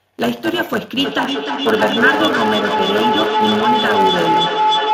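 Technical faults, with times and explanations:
Throughout: block size mismatch (truncated). The speech carries a steady buzz at 100 Hz and runs about 1.07 times fast while keeping roughly its normal pitch, because each block one stage writes is longer than the next stage reads and the tail of every block is discarded. The pattern fits blocks written at 512 samples. On a waveform, small discontinuities recur every 10 ms. On a spectrogram, vertical striations and a comb of harmonics appear at 100 Hz spacing.
1.04 s to the end: feedback howl. From 1.04 s a tone near 1 kHz rises until it sits about 2 dB above the speech, and it continues to the end of the clip. A microphone-to-loudspeaker loop is adding gain on each pass, so the repeats grow instead of dying away and narrow to the frequency the loop favours. The loop repeats roughly every 300 ms. A spectrogram shows a horizontal band near 1 kHz that brightens over time, and the waveform's envelope swells.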